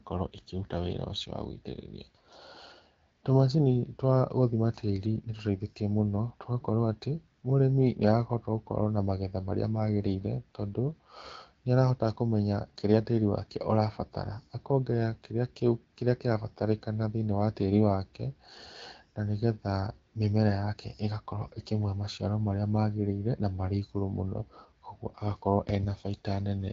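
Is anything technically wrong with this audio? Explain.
No, nothing here is technically wrong.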